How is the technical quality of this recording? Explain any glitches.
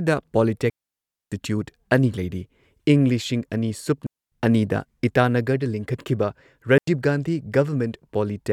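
The recording is marred by three digital wireless dropouts in the speech, at 0.70 to 1.32 s (about 0.62 s), 4.07 to 4.32 s (about 0.25 s) and 6.78 to 6.88 s (about 0.1 s). Each time, the receiver lost too much of the radio data stream and muted itself with a very fast fade, leaving a clean hole of near silence. Unlike an analogue wireless dropout, no hiss or noise burst comes before or after the gap.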